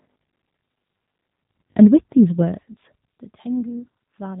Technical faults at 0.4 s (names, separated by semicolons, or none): G.729 codec; robotic sound from repeated short buffers